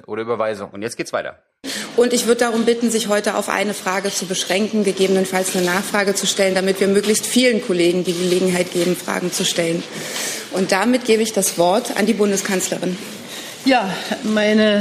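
Nothing stood out as a technical problem on listening.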